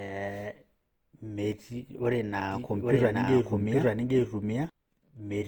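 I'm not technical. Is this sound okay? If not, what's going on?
No. Throughout, the speech sounds swirly, hollow and smeared, which points to generation loss: it was likely compressed and re-saved about three times, so each pass added damage. From 2.52 to 4.70 s, a doubled audio track appears: an equally loud second copy trails by about 0.7 s. Unlike an echo, it doesn't fade away, and it likely comes from an editing or capture mix-up.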